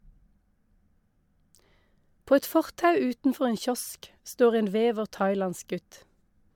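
No technical faults can be heard anywhere in this speech recording.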